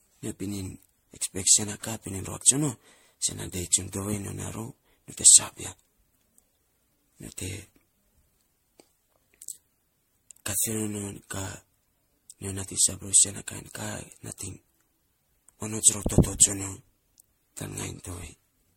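From start to finish, the speech carries generation loss. It sounds swirly, smeared and hollow, and attacks blur. The likely cause is repeated MP3 encoding, around seven passes, at what sounds like 64 kbit/s. Each pass requantises, so artefacts accumulate. Nothing sounds above 16.5 kHz.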